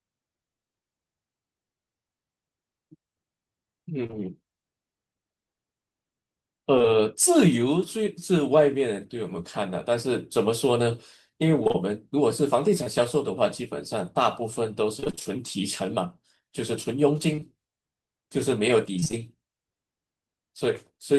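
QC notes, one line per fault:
4.03–4.14 s, repeated packet loss (robotic sound): three gaps totalling 60 ms in 0.11 s, longest 26 ms. Concealment extends the previous sound into each hole, so nearly half the span is synthetic. The real audio never settles between patches, which gives a choppy texture.
15.00–15.38 s, repeated packet loss (robotic sound): seven gaps totalling 140 ms, longest 24 ms. Again close to half the span is filled by extrapolation, producing a sustained choppy stutter.
6.78–6.86 s, short concealed packet loss (two back-to-back): two consecutive 20 ms losses. The decoder continues the last waveform across both, then crossfades back to the real signal. The result is a brief smear or wobble.
11.64–12.88 s, scattered short gaps: about four isolated losses, 80 ms missing in all, each around 20 ms. Each hole is patched from the preceding sound. The audio stays intelligible, with occasional ticks or small hiccups spread over the stretch.
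17.36–19.20 s, scattered short gaps: about seven isolated losses totalling 120 ms, each near 20 ms, with 9 ms of extra time inserted, likely from receive buffer adjustment. The result is the same pattern of sparse ticks and smears across the span.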